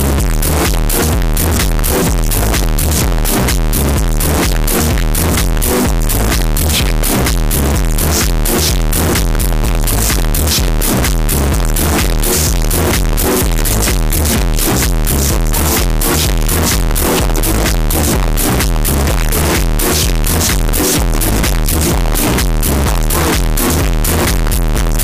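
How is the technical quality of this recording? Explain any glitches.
Poor: one fault damages the entire recording.

Float read as integer, present throughout the full 25 seconds. The likely cause is 32-bit float samples being interpreted as 32-bit integers, so each sample's sign and exponent bits dominate its value. The waveform turns nearly square at an almost fixed, high level, making everything extremely loud and harsh, with background noise as loud as the main sound.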